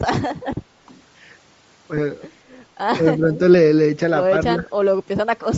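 Throughout the speech, a low-bitrate transform codec appears to be discarding much of the upper spectrum and filling it with noise, which fits Bluetooth LC3 compression at around 32 kbps with 10 ms frames. The result is a plainly audible breathy, grainy edge on the voice.

From 1.97 to 1.99 s, lost LE Audio frames leave the decoder without data for one 10 ms frame, so it repeats the previous spectrum with scrambled phase. The result is a brief noisy smear in place of the speech.

From 3.0 to 3.4 s, and again from 4.44 to 4.7 s, the speech is suppressed in double talk. The echo canceller was likely unable to separate this talker from the far-end echo while both sides spoke, so it turned both down. The voice dips by a few decibels across roughly a third of a second in the first span. In the second it falls by about 10 dB for around a fifth of a second.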